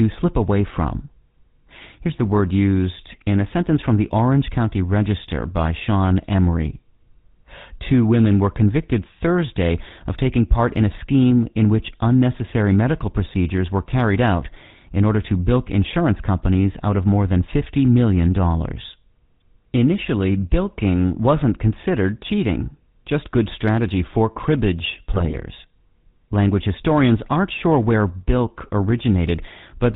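From start to finish, the speech carries the GSM full-rate codec sound. The coder models the vocal tract and excites it with regularly spaced pulses. Only every third excitation sample survives. The result is a buzzy, gravelly roughness. The damage is plainly audible. Nothing passes above 4 kHz, so the top end sounds dull and boxed in. The character fits the 13 kbps full-rate GSM stream.

At 25.12 s, GSM bit errors break in and last until 25.38 s. Corrupted bits reach the decoder during that quarter second. Damaged filter, pitch and gain values bend the spectrum and push the level up frame by frame. The speech turns into squawks, pops and gargling. The burst spans roughly a dozen codec frames, which points to a weak radio link with an error rate near 2 percent.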